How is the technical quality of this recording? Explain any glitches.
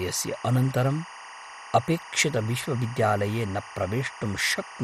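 The recording has two faults that run through the whole speech clip: a chirping tone behind it and a dull, gurgling coding texture.

Timecode bleed is present throughout. Linear timecode at 23.976 frames per second has leaked in from a nearby track or cable, about 15 dB below the speech. Its square wave flips between tones near 1 kHz and 2 kHz, giving a steady warbling chirp. A spectrogram shows continuous horizontal bands at those two frequencies.

The speech also sounds dull and granular, with a gurgling edge and nothing above 14.3 kHz. This is likely MP2 compression at a low bitrate, consistent with about 64 kbps, where starved upper sub-bands switch off and the remaining bands are coarsely quantised. A spectrogram shows a hard ceiling at 14.3 kHz with flickering blocks beneath it.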